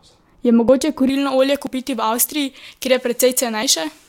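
At 0.69 s a short piece of the speech goes missing, roughly 20 ms, and the sound on either side is butted together with no silence between. This is audio missing between chunks, most likely from a recorder or processor handling the signal in blocks and dropping a fragment at each handover; the spacing of the skips fits chunks of 1 s. From 1.09 s to the end, pre-emphasis has been left on. The treble lift applied for recording or transmission was never reversed, consistent with a J.17 curve, so the top end sits about 11 dB above 1 kHz at 10 kHz, making the speech thin, bright and sibilant. The same kind of gap recurs at 1.67 s and 3.63 s, each about 20 ms lost, heard as abrupt skips where the audio jumps straight from one side of the gap to the other.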